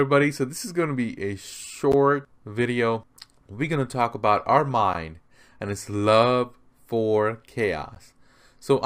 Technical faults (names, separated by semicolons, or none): gap between chunks